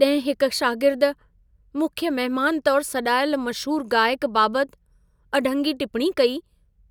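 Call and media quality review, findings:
No audible faults found.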